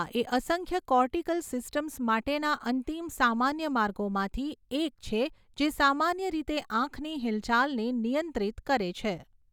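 Speech with no audible faults.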